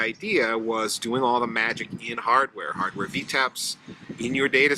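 No technical faults can be heard anywhere in the recording.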